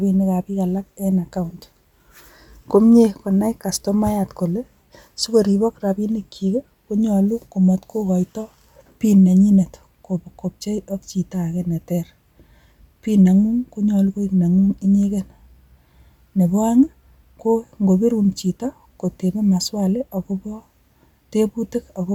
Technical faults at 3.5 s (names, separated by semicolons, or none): none